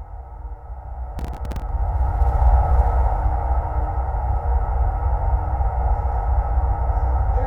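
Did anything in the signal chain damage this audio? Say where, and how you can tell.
Yes. From 1.19 to 1.69 s, processor overload crackle tears through the sound. That is the driver or buffer stage. The processor missed around twenty deadlines. Each miss replayed a scrap of old audio with hard edges. The grain fits buffers of roughly 3 ms.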